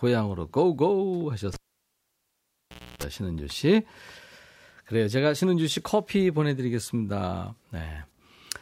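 At 1.54 s the speech cuts off with a sharp pop and drops to near silence for about 1.45 s. Toward the end of that gap a rough 60 Hz buzz rises for roughly 0.3 s before a second pop at 3.03 s brings the audio back. This is a cable pulled and plugged in while live: the connection breaks, and on reinsertion the plug tip touches before the ground does, so mains hum leaks in until the connector seats.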